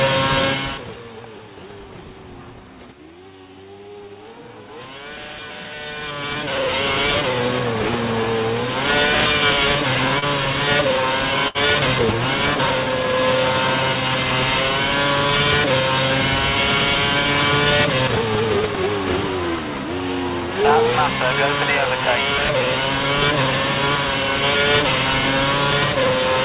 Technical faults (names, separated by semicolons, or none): short concealed packet loss; burst of packet loss